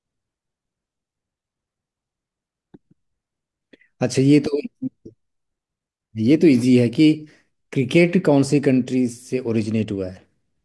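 No technical faults are audible.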